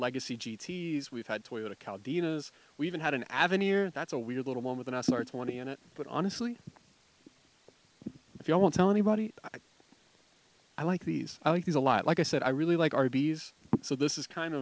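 No technical faults can be heard here; the sound passes through a wideband call codec, likely G.722, which leaves nothing above 8 kHz.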